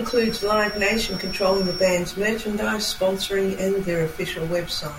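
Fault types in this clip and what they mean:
Feedback whistle: a thin, steady tone near 5.5 kHz sits about 10 dB under the speech from 0 to 2 s, likely a loudspeaker-to-microphone loop held just at the edge of feedback. A spectrogram shows one bright horizontal line there, swelling and fading slowly in level.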